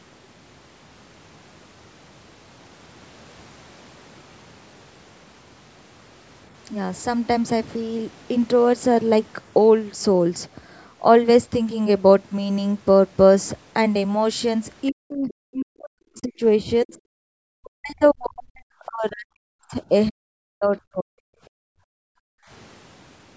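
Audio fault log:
14.90–16.43, 16.84–17.00, 17.56–19.92, 20.10–20.76 and 20.92–21.26 s, speech suppressed in double talk: both ends were likely talking at once, so the echo canceller mistook the near talker for loudspeaker echo and turned it down. The speech dips by up to about 40 dB (about 25 dB in the brief 16.84 s dip), breaking into pieces.
21.54–22.49 s, background gated by the echo canceller: with the loudspeaker playing, the canceller clamped the microphone hard, cutting the room sound by about 40 dB for roughly a second. The ambience drops out, then returns when the canceller releases.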